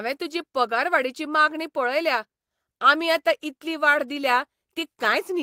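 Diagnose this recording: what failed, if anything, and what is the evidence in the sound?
Nothing failed in this recording; the sound shows no evidence of a fault at any stage.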